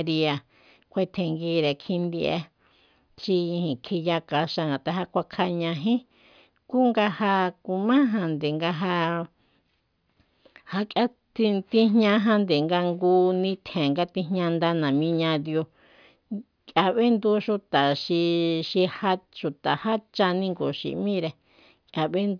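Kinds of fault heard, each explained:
No technical faults heard.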